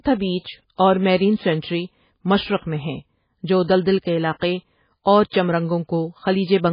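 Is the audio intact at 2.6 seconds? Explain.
No. At 2.6 seconds, as across the whole clip, the speech carries heavy damage from what is likely MP3 compression. There is nothing above 5 kHz, and the sound is watery and swirly, with smeared consonant attacks. This fits a very low bitrate around 16 kbps: the encoder drops the treble outright and zeroes weak frequency lines that flicker on and off between frames. A plain low-pass filter would dull the top but leave no swirling or chirping.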